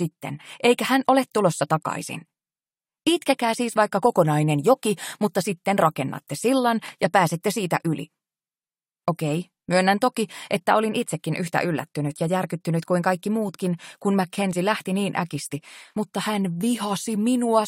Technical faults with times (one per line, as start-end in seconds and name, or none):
none